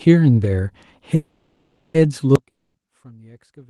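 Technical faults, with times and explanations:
1.15–1.97 s, call audio freeze: the speech stalls and the last sound smears on as a fading buzz for roughly 0.79 s before picking up exactly where it left off. That's likely late packets draining the jitter buffer, so nothing's lost, just a gap pushed in.
2.36 s to the end, audio dropout to a faint residue: the speech cuts out abruptly mid-flow, and all that's left is a faint leak of it, about 25 dB down. It never comes back. Likely the signal feed dropped while the rest of the chain stayed live.
2.50–2.77 s, long network dropout: inside that faint stretch there's a short fading buzz, then about 0.2 s of silence, and when the sound resumes about 0.24 s is simply gone. Likely a run of packets never arrived, so the receiver papered over the hole.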